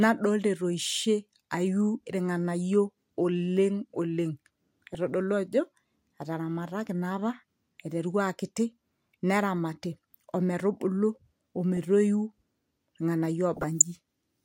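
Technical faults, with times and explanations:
4.94 s, 9.51 to 9.63 s, 11.77 s and 13.57 to 13.82 s, DAB burbling: Brief bursts of burbling break over the speech. The last burst is the longest and roughest. Weak reception lets a small fraction of a percent of bit errors slip past error correction into the MP2 audio data. Corrupted samples put short blips of noise in single sub-bands, and corrupted scale factors make sub-bands jump in level for up to a frame. That points to several damaged frames per burst.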